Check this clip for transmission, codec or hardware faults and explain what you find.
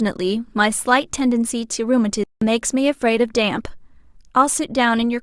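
One fault stands out, a playback stall. From 2.24 to 2.42 s the speech halts into silence for about 180 ms, likely because the player ran short of data or was blocked. That pause is longer than a brief packet-loss glitch.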